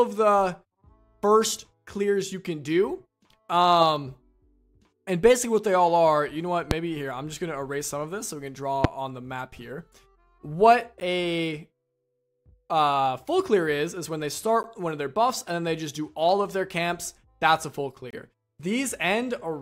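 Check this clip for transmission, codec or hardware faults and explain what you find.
There are two kinds of fault here: a pair of loud pops and three short dropouts to digital silence.

The loud pops land at 6.71 s and 8.84 s. Each is a single sharp pop, roughly 20 dB above the sound, which carries on underneath. A voltage spike is the likely cause, from a switch, static or a driver hiccup, shaped by the circuitry after it.

The blocks of digital silence hit at 11.00 s and 14.63 s (10 ms each) and from 18.10 to 18.13 s (25 ms). Samples get swapped for zeros, typically when the output buffer isn't filled in time. The hard edges turn the short ones into ticks, and the longest into a brief hole.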